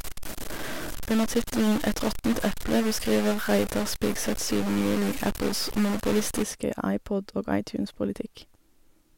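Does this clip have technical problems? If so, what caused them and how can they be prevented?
Yes. From the start to 6.43 s the speech carries a harsh, buzzy distortion. The pauses are not silent but filled with steady noise. This points to a stuck bit. One data bit seems to hold a fixed value, so about half the samples are off by a step of about -30 dBFS. The broken line or converter is the likely cause. To prevent it, check converter wiring and run a bit-pattern test before recording.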